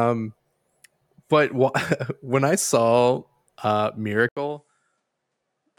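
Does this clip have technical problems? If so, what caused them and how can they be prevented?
Yes. At 4.29 s the sound cuts out for 80 ms, and from there to the end of the clip the speech is about 10 dB quieter, has nothing above 10.5 kHz, and sits on a different noise floor, roughly 50 dB below the speech. This sudden change in bandwidth, level and background is likely an input switched to a poorer device mid-recording, such as another microphone or a headset's call profile. To prevent it, lock the recording input to one device and disable automatic device switching for the session.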